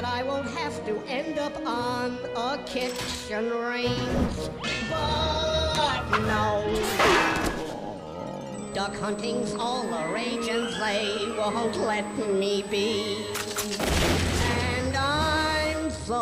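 A fixed-pitch whine at 8 kHz enters the audio at 8.54 s and runs to the end. It sits roughly 20 dB below the sound. This is USB whine. The bus's 125-microsecond microframes leak current noise through the power or ground.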